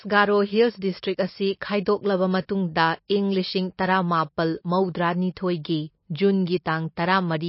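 Right from the start the whole clip carries plainly audible MP3 compression damage, likely from a low-bitrate encode. There's nothing above 5.6 kHz, so the treble is simply gone and the speech sounds dull. The encoder was starved of bits, which fits something down around 27 kbps. It had to zero out the weaker frequency lines, and because those flicker in and out from frame to frame you get that watery, swirly texture, with sibilants turning metallic and chirpy.

Then at 3.08 to 3.10 s there's a quick pre-echo. A sharp attack lands late in a transform block, and the codec spreads its quantisation noise across the whole block. The noise budgeted for the loud onset leaks back into the quiet gap just ahead of it. What you hear is a short hiss smeared about 20 ms before the attack, which makes the onset itself sound softer and blurred rather than crisp.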